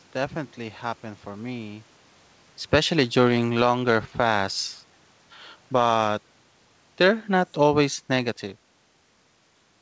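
From 5.6 to 8.46 s the automatic gain falling: the gain control judges the input too loud, or its background noise too strong, and lowers its gain gradually, by about 5 dB in total. The speech sinks steadily across those seconds, and the room noise behind it sinks too.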